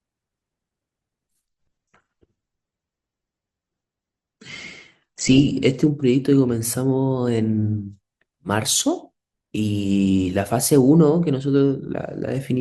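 From 1.47 s to 5.47 s the speech drops abruptly in quality with no gap, the mark of an adaptive stream switching to a lower bitrate while the connection slowed. The sound points to a step down from roughly 64 kbit/s to about 12 kbit/s Opus. In that stretch nothing is heard above 8.1 kHz, so sibilants lose their top end, and coding artefacts rise. At 5.47 s full bandwidth returns just as suddenly.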